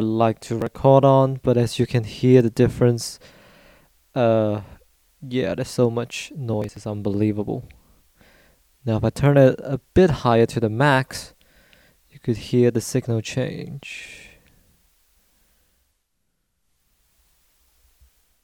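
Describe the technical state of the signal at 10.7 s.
At 10.7 s the signal is intact, with no dropout, distortion, glitch or other technical fault.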